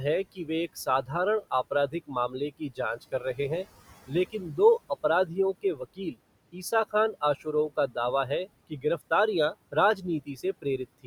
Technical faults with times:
0.00-11.07 noise suppressor artifacts
0.24-1.10 speech cut by the noise suppressor
1.88-3.66 speech cut by the noise suppressor
4.06-4.58 speech cut by the noise suppressor
4.89-6.18 speech cut by the noise suppressor
6.52-7.97 speech cut by the noise suppressor
8.29-9.02 speech cut by the noise suppressor
9.72-11.07 speech cut by the noise suppressor

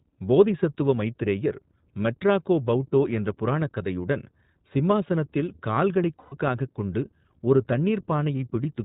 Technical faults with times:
0.00-8.85 iLBC codec
6.20-6.35 lost iLBC frames

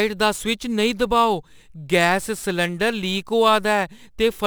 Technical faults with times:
0.00-4.46 crude rate conversion

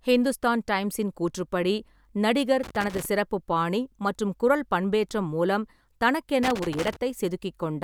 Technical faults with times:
2.63-3.05 loose connector crackle
6.43-6.96 loose connector crackle

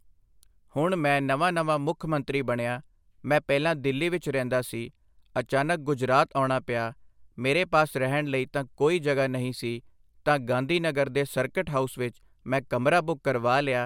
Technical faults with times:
none

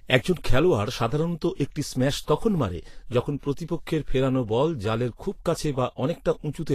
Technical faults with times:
0.00-6.75 Vorbis compression
2.25-2.28 pre-echo

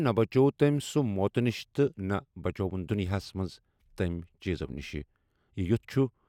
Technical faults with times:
none

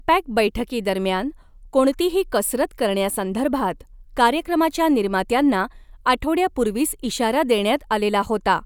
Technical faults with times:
none

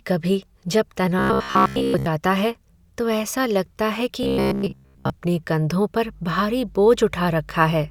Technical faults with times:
1.19-2.06 robotic sound from repeated short buffers
4.23-5.10 robotic sound from repeated short buffers

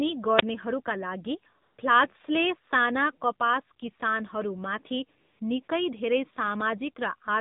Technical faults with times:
0.00-7.40 AMR narrowband mobile codec
1.62-1.78 AMR comfort noise
5.20-5.68 AMR comfort noise

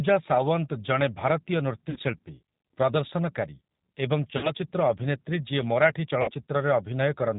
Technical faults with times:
0.00-7.38 G.729 codec
1.90-1.98 VoIP packet loss concealed by the speech codec
4.37-4.49 VoIP packet loss concealed by the speech codec
6.22-6.30 VoIP packet loss concealed by the speech codec

